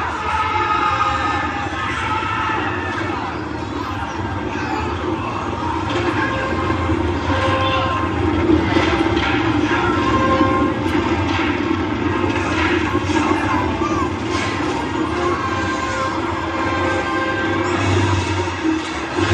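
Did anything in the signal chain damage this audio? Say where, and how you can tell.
No, nothing in the signal chain damaged this audio.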